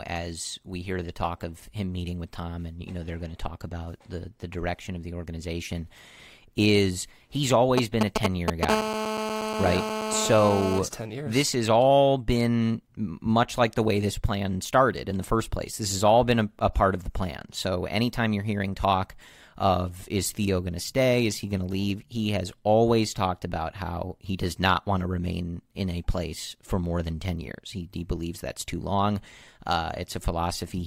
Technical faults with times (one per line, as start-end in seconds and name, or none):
7.78-8.65 GSM signalling bursts
8.69-10.79 GSM phone buzz